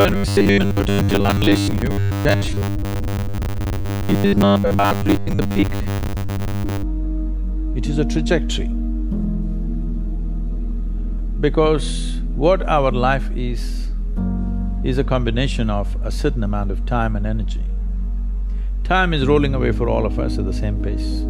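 From 0.01 to 6.84 s the sound turns into a rigid, metallic buzz fixed at 100 Hz, the robotic sound from repeated short buffers. A roughly 10 ms segment is likely being looped in place of missing audio for most of that stretch.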